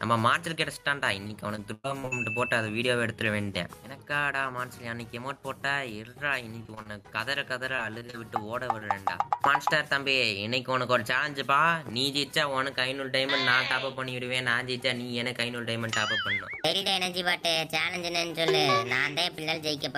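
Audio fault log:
1.27–2.13 s, 6.63–7.06 s and 7.76–8.15 s: repeated packet loss (robotic sound). Audio kept arriving too late or not at all. The first stretch has five gaps, the longest about 105 ms, and a quarter of it is patched. The other two have four short gaps each, none over 28 ms. The receiver fills each hole by extending the last sound. Holes come back to back, so the sound turns choppy, with pieces missing.
8.8 s: short concealed packet loss. About 20 ms never reached the decoder in time. The receiver bridged it by carrying the previous sound forward, then blended back into the real signal. The result is a brief smear or wobble rather than a clean gap. Anything very short in that slot can drop out.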